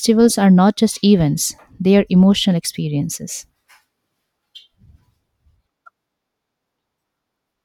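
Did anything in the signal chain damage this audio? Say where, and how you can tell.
No, no signal chain damage.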